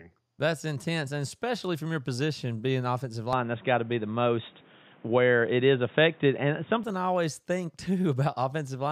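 From 3.33 to 6.84 s, after "your position being offensive", the speech goes dull and boxy, cut above 3.8 kHz, likely an input switched to a poorer device.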